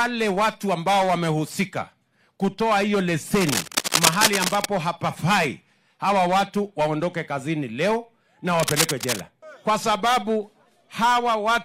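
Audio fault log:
3.35–4.66 s and 8.54–9.20 s, cable scratch noise: dense, irregular scratching and rustling sits over the sound, about as loud as it in the first burst and a little quieter in the second. It is likely a worn connector or lead being moved. Unlike steady crackle or isolated clicks, it comes in uneven clustered bursts.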